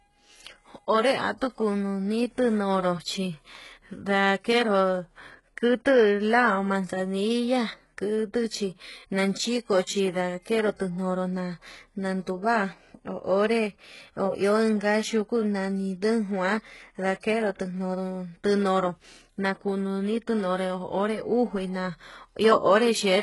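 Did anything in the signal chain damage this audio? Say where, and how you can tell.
Yes, at the codec stage, and it runs through the whole speech clip. The top end sounds synthetic: s sounds come out gritty and lispy, and nothing gets past about 11.5 kHz. That points to heavy HE-AAC compression as the likely cause, at a rate that fits roughly 12 kbps. Only the lower band is really coded. The treble is copied up from below and shaped with a coarse envelope, so its harmonics don't line up with the real ones.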